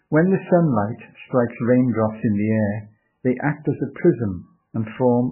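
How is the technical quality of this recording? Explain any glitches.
Pretty rough, honestly. The whole clip is heavily damaged by what is likely MP3 compression, and it never lets up from start to finish. There's nothing above 3 kHz, so the speech sounds dull and boxed-in. Starved for bits, the encoder is dropping weaker frequency lines that blink on and off from frame to frame, giving that watery, swirly texture, with smeared consonant attacks. That degree of damage fits a very low bitrate, somewhere around 9 kbps.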